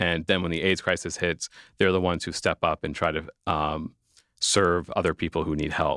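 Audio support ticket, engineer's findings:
No transport, buffering, clocking or level-handling problems found on review of the speech recording; signal path looks intact throughout.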